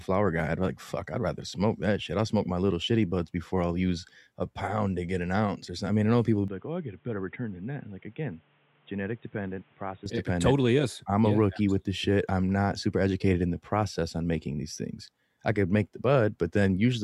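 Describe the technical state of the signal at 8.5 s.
At 8.5 s the speech sounds dull, boxy and about 10 dB quieter, with nothing above 3.8 kHz and a new noise floor roughly 30 dB down. This runs from 6.48 s, after "mean I know people", to 10.06 s, before "it dependent totally is", with no gap at either switch. The likely cause is the input switched to a poorer device, a narrower-band microphone or headset call profile.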